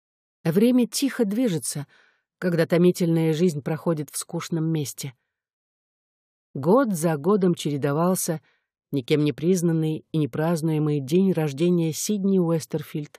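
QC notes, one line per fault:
Nothing to flag here; I listened all the way along and didn't catch a single problem worth a note.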